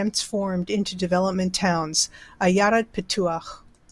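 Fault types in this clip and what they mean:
Nothing wrong turns up anywhere in this speech clip.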